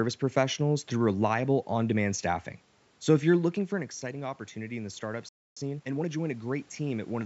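Automatic gain rising from 3.72 s to 7.24 s, beginning after "if you're looking": the talker moves away near 3 s and the input drops by about 12 dB. The gain control responds by raising its gain gradually by about 5 dB, so voice and background swell together.

Playback stall at 5.29 s: the sound cuts out mid-flow and stays silent for 0.28 s before resuming. The player likely ran out of buffered data or had its output thread blocked, leaving nothing to play until it recovered.

Time-compressed catch-up from 5.57 s to 6.11 s: to clear the backlog the stall left, the player removes small slices and cross-fades across the joins, running at 1.5 times normal speed. The audio sounds hurried but keeps its pitch.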